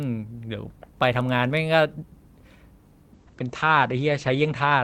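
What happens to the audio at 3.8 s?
At 3.8 s the audio is inside a call bitrate drop running from 3.15 s to the end. The encoder's rate falls from 32 to 11 kbps and its bandwidth narrows from 20 kHz to 8 kHz, so the speech turns coarse, watery and muffled.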